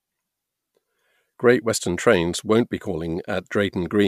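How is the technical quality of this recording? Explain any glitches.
Nothing in this recording jumps out as a glitch, so there's really nothing here to explain.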